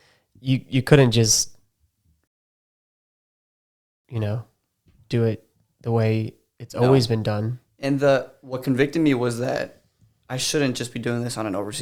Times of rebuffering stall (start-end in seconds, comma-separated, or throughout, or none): 2.27-4.05